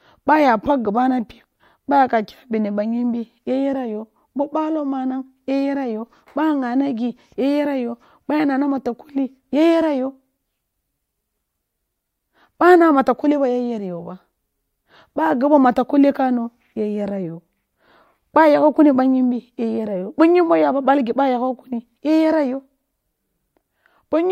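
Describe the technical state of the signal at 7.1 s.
At 7.1 s the signal is intact, with no dropout, clipping, glitch or other fault audible at that moment.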